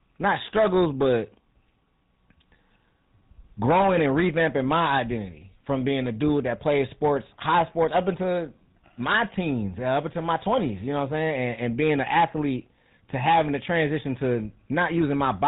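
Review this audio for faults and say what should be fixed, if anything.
Throughout the speech there is a buzzy, gravelly roughness that fits the GSM full-rate codec at 13 kbps. It models the vocal tract and excites it with coarse regularly spaced pulses, and cuts everything above 4 kHz. Plain band-limiting would sound dull but stay smooth, without the rasp. Record or transfer the speech over a wideband path, or keep an uncoded copy, so it never passes through GSM coding.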